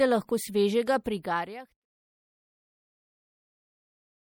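MP3 compression damage runs through the whole speech clip and is plainly audible, likely from encoding at a low bitrate, which fits a figure around 64 kbps. Short of bits, the encoder cuts the treble at a fixed frequency and drops weak frequency lines that flicker on and off between frames, giving the voice a watery, swirly texture with metallic chirps on s sounds and softened attacks. On a spectrogram this shows as a flat ceiling above which there is no energy, with patchy, blinking holes below it. The level also fades smoothly out, from about 1 s and ending at 1.86 s, with no click, appearing on the waveform as an even taper.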